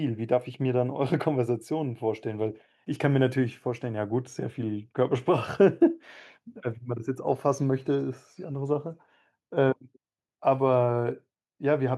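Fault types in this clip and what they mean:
No technical faults are audible anywhere in the recording.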